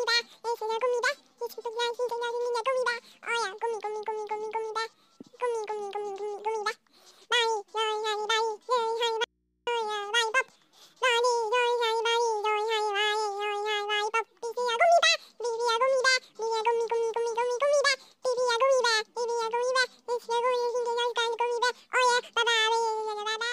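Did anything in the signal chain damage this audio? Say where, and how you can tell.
Yes. A connection in the analogue wiring likely broke briefly, leaving the input open. An audio dropout to a faint residue runs from 9.24 to 9.67 s: the sound cuts abruptly for 0.43 s, and the gap holds only mains hum about 50 dB below the signal.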